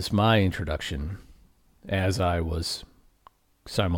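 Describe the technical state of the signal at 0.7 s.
At 0.7 s the speech signal is intact, with no audible fault at that moment.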